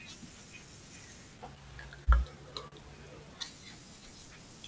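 A short speech recording that came over a call path, with nothing above 8 kHz, which fits a wideband codec like G.722. The fault is a pair of short stalls from a late packet, at 2.04 to 2.09 s and 2.68 to 2.74 s. Each time the jitter buffer ran dry, so the receiver stretched the last bit of sound, for 28 ms and then 41 ms, until the packet showed up. Nothing's lost, but you hear a brief hold with a faint buzz or dip.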